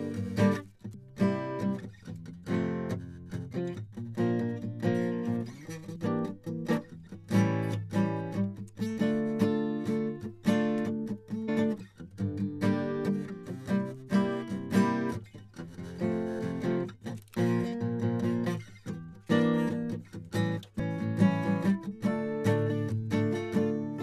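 At 0.93, 5.95, 11.47, 17.09 and 20.78 s the music jumps forward, the mark of compressed frames being skipped: whole frames, each 23.2 ms long, never reach playback, so between roughly a tenth and a third of a second vanishes each time. Because adjacent frames overlap, each join is a short smeared blip, not a sharp click. A waveform shows abrupt discontinuities in phrasing, and a spectrogram shows vertical smudges where the texture changes suddenly.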